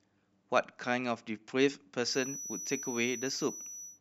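Speech, with a thin, steady whistle near 5.9 kHz, roughly 10 dB below the voice, from 2.01 s to the end: a feedback whistle, likely from a loudspeaker-to-microphone loop held right at the edge of feedback.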